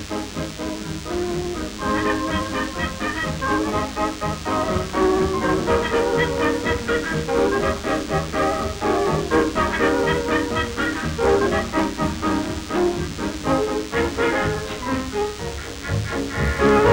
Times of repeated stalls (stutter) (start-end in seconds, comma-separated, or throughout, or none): none